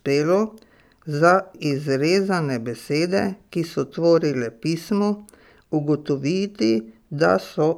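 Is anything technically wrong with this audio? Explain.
No, nothing technically wrong here.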